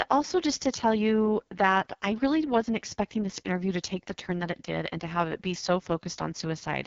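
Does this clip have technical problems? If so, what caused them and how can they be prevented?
Yes, the whole clip has been through the AMR wideband (HD Voice) codec, and at what sounds like its very lowest rate, which fits the 6.6 kbit/s mode. Nothing reaches above about 7.1 kHz. The speech has that rough, raspy, buzzy grain you get when the pulse-driven vocal tract model has too few bits to track the voice properly. The top band, roughly 6.4 to 7 kHz, is just shaped noise standing in for real detail. To prevent it, run the call or recording at 12.65 kbit/s or higher so the codec has enough bits to keep the speech clean.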